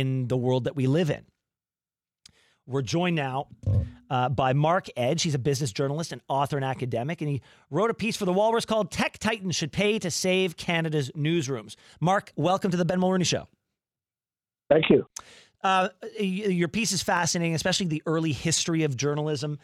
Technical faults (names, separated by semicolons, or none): none